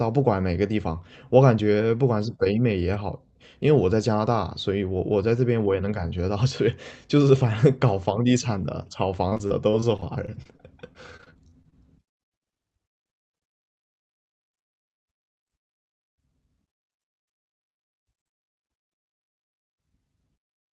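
Between 9.29 and 11.74 s the speech suffers repeated packet loss, giving a robotic sound. Audio packets kept arriving late or not at all, and each hole, the longest about 30 ms, was covered by stretching the preceding sound. Some 387 ms was filled this way, about 16% of the stretch, so the speech turns choppy, with fragments dropping out. The call codec's top end stops near 8 kHz, which fits a wideband Opus setting.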